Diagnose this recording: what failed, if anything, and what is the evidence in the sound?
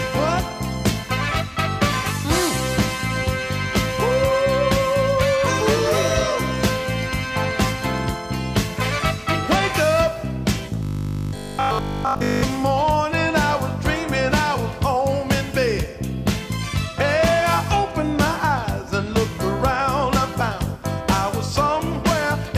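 Between 10.83 and 12.43 s the audio turns into robotic sound from repeated short buffers, a rigid 50 Hz buzz. Repeating a 20 ms slice throughout, rather than leaving silent gaps as dropouts would, likely points to buffer starvation at the driver or buffer stage.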